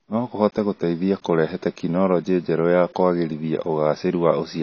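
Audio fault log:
Throughout, low-bitrate audio saved at a high bitrate: nothing above 6.6 kHz, likely from an earlier low-bitrate encode whose losses the later high-bitrate MP3 cannot restore.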